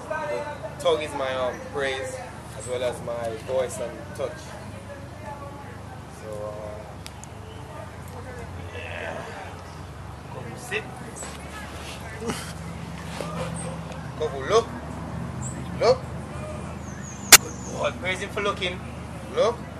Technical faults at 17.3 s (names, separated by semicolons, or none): corrupt frame decoded